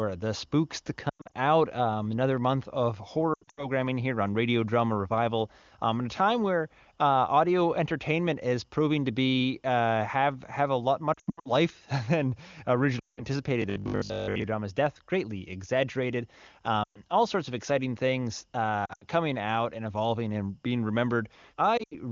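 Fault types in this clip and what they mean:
Lost AMR speech frames: radio errors knock out short stretches, and the decoder covers each gap by replaying its last good pitch and vocal tract settings at falling gain. There are seven bursts between 1.1 and 21.8 s, heard as dips that drop to near silence, the longest around 11.1 to 11.5 s.
Robotic sound from repeated short buffers: from 13.62 to 14.44 s the speech turns into a stiff, metallic 50 Hz buzz that still loosely follows the words. The likely cause is the player looping its last chunk for most of that stretch, which fits a 20 ms buffer.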